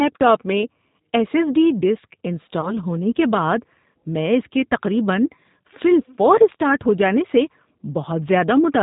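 Throughout, the speech passes through a G.729 codec at 8 kbit/s, which resynthesises it from a filter and a few pulses, leaving it band-limited below 4 kHz, slightly rough and synthetic. From 2.61 to 2.73 s, a gap of about 20 ms, which fits one lost packet, shows VoIP packet loss concealed by the speech codec: the decoder extrapolates a fading stretch, and the voice stays weak briefly afterwards.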